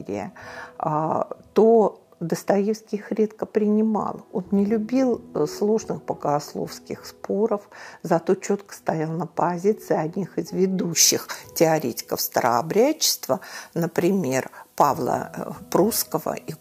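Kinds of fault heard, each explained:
Pre-emphasis left on: from 10.92 s to the end at 16.60 s, the top end jumps up. It sounds like the treble boost that FM uses before transmission, the 75 µs curve, was never undone by the matching de-emphasis on playback. Around 10 kHz it sits about 14 dB hotter relative to 1 kHz, so that last stretch comes across thin, glassy and bright, with sibilant-type edges.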